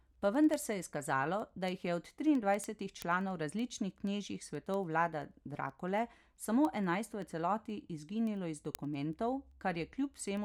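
From 0.16 s to 10.37 s, sharp ticks run beneath the speech at a steady rate of roughly ten per second, around a hundred in all. These are word clock ticks. The receiving device is running on its own clock rather than locking to the digital link's sender. The two clocks differ by something like a couple of hundred parts per million, so they keep slipping past each other, and at each slip a single sample is dropped or repeated, leaving a click.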